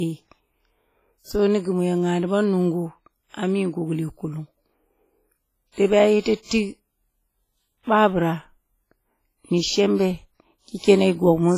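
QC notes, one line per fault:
throughout: likely WMA compression. The speech rings and sounds washy, and its hiss breathes with the signal because coarse quantisation spreads noise across long transform blocks. A spectrogram is empty above 15.4 kHz, with holes where weak components were zeroed. The heavy damage fits a bitrate around 24 kbps.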